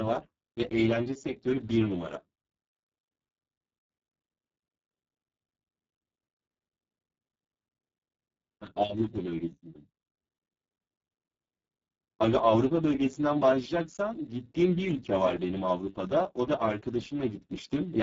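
Speex codec damage runs throughout: the speech sounds hoarse, noisy and robotic, which fits a very low setting near 5.8 kbps starving the excitation, with nothing above 7.7 kHz.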